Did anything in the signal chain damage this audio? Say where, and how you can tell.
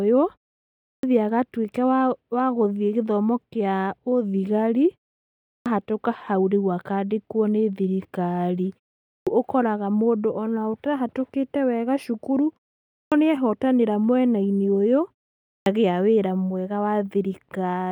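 Yes: a clipped start after a pause, at the playback or output-device stage. After each silence of roughly 0.4 to 0.6 s, speech cuts in abruptly without its opening sounds, at 0.88, 5.50, 9.12, 12.97 and 15.49 s, each time losing about 150 to 170 ms. The device idles during the gap and needs that long to wake before it passes audio. Unlike muted pauses, which only silence the gaps and lose nothing, this fault eats the start of the next speech.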